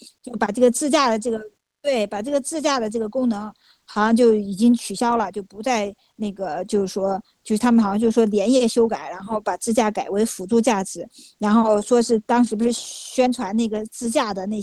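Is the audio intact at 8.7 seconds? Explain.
Yes, the speech at 8.7 seconds is intact, with no audible fault at that moment.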